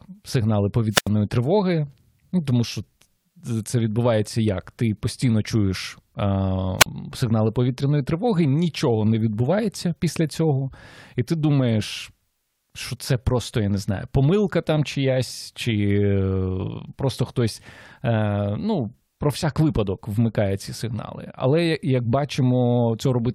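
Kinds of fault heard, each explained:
Wireless microphone squelch dropout: the FM radio link fades until the receiver's squelch mutes its output, so a brief swell of hiss gives way to near silence, 86 ms long at 0.89 s, just before "тривоги ну тому що", and 39 ms at 6.79 s.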